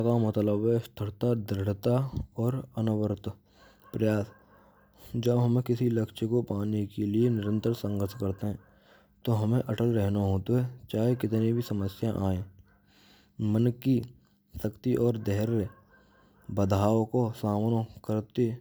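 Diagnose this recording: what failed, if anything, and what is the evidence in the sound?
Nothing in the chain has failed: the speech signal holds a steady level and unbroken continuity, and no stage from capture through to playback leaves an audible mark on it.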